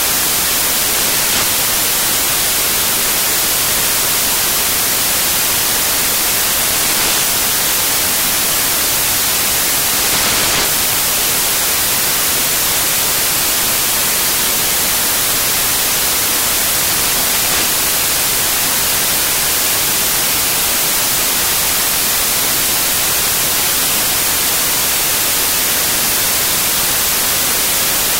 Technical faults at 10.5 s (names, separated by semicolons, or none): samples built from the wrong bytes